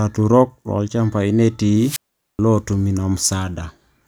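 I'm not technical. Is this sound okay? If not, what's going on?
No, not quite. From about 1.78 to 2.39 s there's a wireless microphone squelch dropout. The radio signal got too weak, so the receiver briefly hissed, then muted itself for roughly 0.43 s of near silence before the speech came back.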